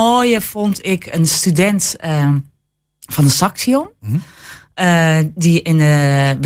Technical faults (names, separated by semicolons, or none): none